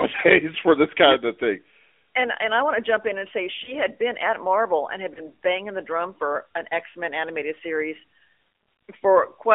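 Throughout the speech, the AMR narrowband mobile codec sets the sound. The band runs only from about 300 Hz to 3.5 kHz, with nothing above 4 kHz. The codec damage is plainly audible: the voice sounds buzzy and synthetic, which fits AMR-NB at a mid rate of around 10.2 kbps. This coder rebuilds the voice from a vocal tract model excited by a few pulses per subframe, so fine detail is replaced by an approximation.

Lost AMR speech frames appear twice. The first runs from 3.64 to 3.74 s, between "jump in and say" and "had been at". The second runs from 5.14 to 5.20 s, between "and had" and "banging the drum for". Each gap fits a single 20 ms frame. At those points the decoder repeated the last good pitch and vocal tract settings at reduced gain, which produces a brief dip or warble in the voice.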